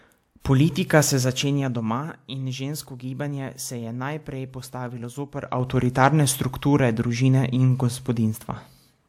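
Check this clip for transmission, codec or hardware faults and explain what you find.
Two kinds of fault are present: pre-echo near the start, and zipper noise during two level changes.

Pre-echo occurs at 0.40 to 0.45 s. A hiss runs for 51 ms before a sharp attack. The codec spread quantisation noise over its whole block, so noise sized for the onset fills the quiet moment before it. The attack sounds soft or smeared.

Zipper noise occurs twice. From 1.16 to 2.16 s, just before "in žensko gibanje se", the level falls roughly 10 dB in 2 dB steps, about five per second. From 5.32 to 5.76 s it rises roughly 10 dB, about fifteen steps per second. Each unsmoothed step clicks, producing a ticking zip.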